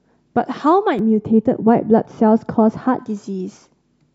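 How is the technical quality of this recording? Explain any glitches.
The recording has one clear fault, heard in the middle of the speech. From 0.99 to 2.99 s, de-emphasis is applied wrongly: a treble cut meant to reverse pre-emphasis lands on audio that never had it, or is applied a second time. The highs roll off gradually, to about 11 dB down at 10 kHz relative to 1 kHz, so the speech turns dull and muffled. The gentle, continuous slope, with no sharp cut-off point, distinguishes it from a low-pass filter.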